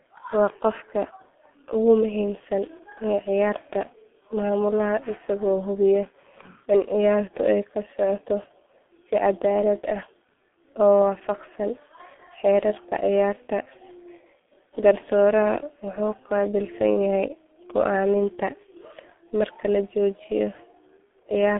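Across the whole clip, the speech passes through a G.723.1 codec at 6.3 kbit/s. Its slow, coarse frame-by-frame voice model leaves the sound muffled and hoarse with smeared consonants. A spectrogram shows energy confined to roughly 200 Hz–3.4 kHz, nothing above 3.8 kHz, and blurred, blocky harmonics.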